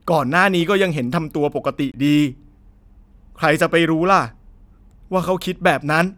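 At 1.92 to 1.94 s the speech drops out for about 23 ms, a short hole that then picks up as though the audio kept running underneath. That's a Bluetooth dropout, most likely one audio packet arriving too late and getting discarded.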